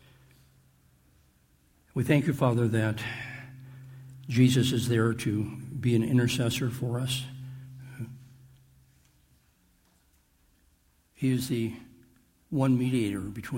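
No technical faults can be heard anywhere in this audio.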